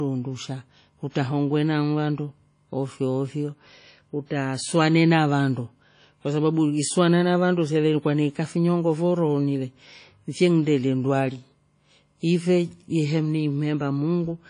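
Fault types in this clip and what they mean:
WMA compression: The speech has a ringing, washy quality throughout, with a hiss that swells and fades with the talker's level, and nothing comes through above about 10.1 kHz. The damage is plainly audible and is likely from low-bitrate Windows Media Audio encoding, consistent with roughly 32 kbps. At that rate the encoder throws away weak high-frequency detail and lets its quantisation noise smear across long transform blocks.
pre-echo: Just before one sharp onset, from about 1.10 to 1.15 s, a short burst of hiss arrives ahead of the sound it belongs to, and the attack itself lands soft and blurred. The transform codec spread its coding noise evenly over a whole block. Because the attack sat late in that block, noise sized for the loud moment leaked back into the quiet gap before it, smearing about 55 ms early.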